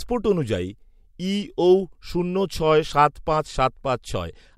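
Speech recording; no audible technical faults anywhere in the clip.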